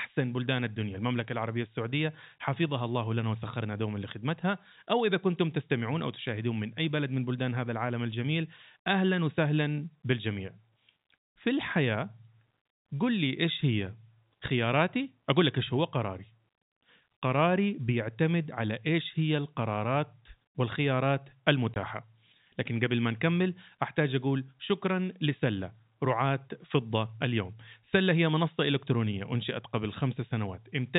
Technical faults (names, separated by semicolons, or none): packet loss filled with silence